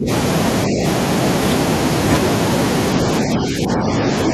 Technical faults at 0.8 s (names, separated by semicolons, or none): speech suppressed in double talk